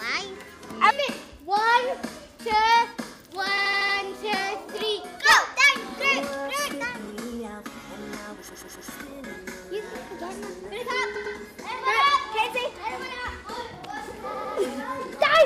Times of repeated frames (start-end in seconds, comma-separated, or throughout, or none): 3.57-3.96, 8.48-8.87, 11.14-11.35, 14.33-14.54